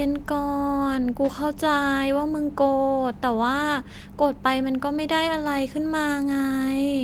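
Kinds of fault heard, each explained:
No technical faults heard.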